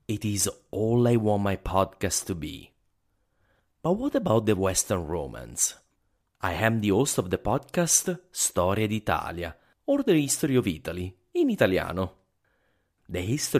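From start to finish the speech carries a gritty, inharmonic fizz that rides on the louder and brighter sounds, typical of crude rate conversion. The sample rate was raised by simply repeating the nearest sample instead of filtering, and the repeat pattern suggests a 32 kHz to 48 kHz step. That stair-stepping leaves an error only around 15 dB below the speech, heard as buzzy tones unrelated to the voice.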